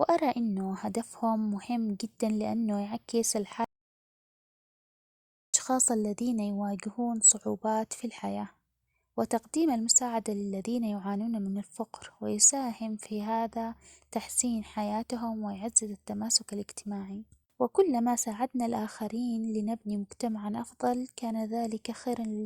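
At 3.64 s the speech cuts out mid-flow. An audio dropout to silence follows, lasting about 1.9 s until 5.54 s. The gap is silent with no room tone. The input was likely lost while recording continued. Speech resumes with "الذين يواجهون صعوبات في".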